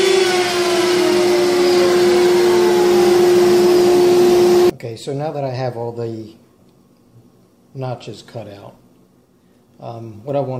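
No technical faults are audible.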